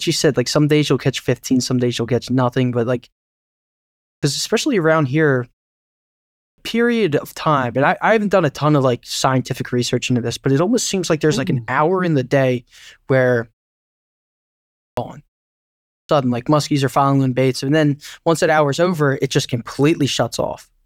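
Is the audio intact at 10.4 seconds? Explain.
Yes, the speech at 10.4 seconds is intact, with no fault at that moment.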